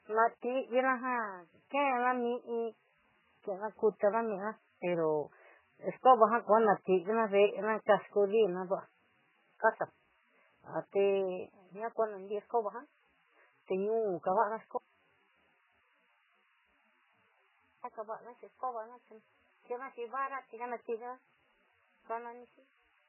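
Throughout the speech, heavy codec damage is audible, likely from MP3 compression at a very low bitrate, which fits roughly 8 kbps. Nothing survives above 3 kHz, and weak spectral detail flickers between frames, giving a watery, swirly texture with smeared consonant attacks.

From 14.77 s to 17.84 s, the speech cuts out abruptly for about 3.1 s and comes back just as suddenly. This is an audio dropout to a faint residue. Only hiss, far below the normal signal level, remains in the gap, likely because the wanted signal was lost while the path after the break stayed live.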